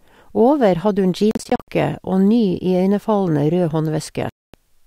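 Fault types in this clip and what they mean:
Bluetooth dropout: the speech falls silent and resumes as if it had played on, first in short holes up to 61 ms scattered across 1.31 to 1.68 s, then one 0.24 s gap at 4.29 s; likely late packets dropped before reaching the headphones.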